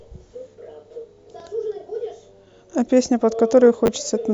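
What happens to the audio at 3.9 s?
Chunks out of order at 3.86 to 3.88 s: a 10 ms chunk of speech arrives one chunk late and plays after the one that should follow it. Nothing is lost, but the swapped order leaves three hard joins, heard as a brief jumbled blip.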